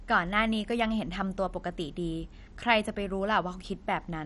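Throughout the speech, the signal was most likely squeezed through MP2 compression at a bitrate that sounds like about 48 kbps, starving the upper sub-bands of bits. Nothing survives above 11.3 kHz, so the sound is dull, with a plainly audible gurgling, granular roughness.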